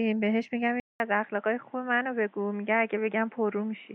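At 0.8 s a 200 ms gap opens, then the speech returns duller, a few decibels quieter, over a new noise floor about 35 dB below the speech, likely an input switched to a poorer device. The spectrogram shows nothing above 3.8 kHz from there to the end.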